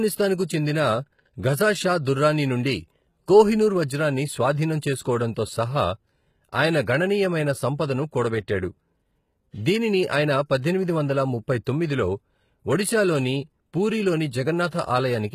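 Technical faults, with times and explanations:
Throughout, HE-AAC compression: the treble sounds bright but synthetic, with gritty, metallic sibilants and a clearly damaged quality across the speech, likely from HE-AAC coding at a very low rate, which fits a stream around 20 kbps. The upper bands are copied up from lower ones and shaped only coarsely, so harmonics stop lining up. On a spectrogram, upper bands show repeated, blocky patches of the lower spectrum, and nothing appears above 14.9 kHz.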